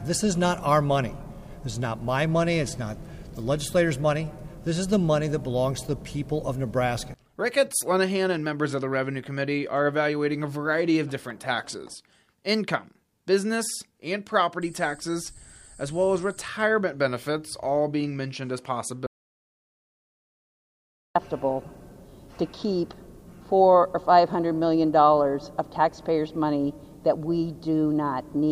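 At 19.07 s the sound cuts off mid-flow and the track falls to silence, with no room tone or background left underneath, until it resumes abruptly at 21.15 s. About 2.09 s of audio is simply gone. This is an audio dropout to silence: the input signal was likely interrupted, through a disconnected device, a failed link or an accidental mute, while the recorder kept writing silence, so nothing from that stretch survives.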